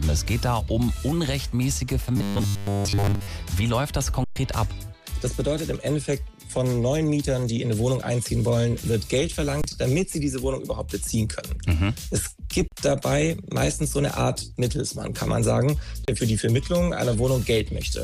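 From 2.17 to 3.27 s there's robotic sound from repeated short buffers: a rigid 100 Hz buzz, likely from looping roughly 10 ms chunks while most of the real audio gets skipped. Then come underruns with a held sample at 4.24–4.36 s (120 ms), 9.62–9.64 s, 12.68–12.72 s and 16.05–16.08 s: the output goes flat and stops, dropping around 20 to 100 ms of audio each time.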